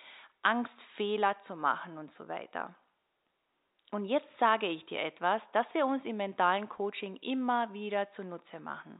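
Nothing's wrong in this bit of speech: it comes through the usual 64 kbps telephone coding with the expected 4 kHz top end, and the faint room noise sits about 54 dB below the talking.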